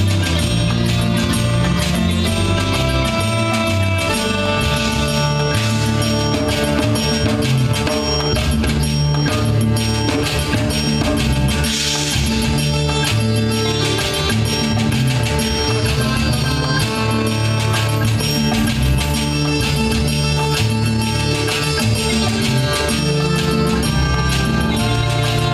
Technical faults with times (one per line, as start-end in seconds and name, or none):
none